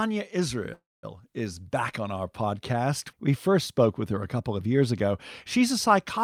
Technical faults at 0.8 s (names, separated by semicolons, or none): call audio freeze